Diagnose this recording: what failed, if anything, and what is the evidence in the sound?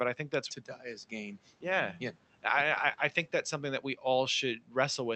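Speech cut by the noise suppressor, at the call-processing stage: from 4.64 to 4.75 s, about a tenth of a second of speech sinks by up to about 12 dB along with the background. The suppressor mistook that low-level speech for noise. Unlike packet loss, the sound fades rather than dropping out, with no click or warble.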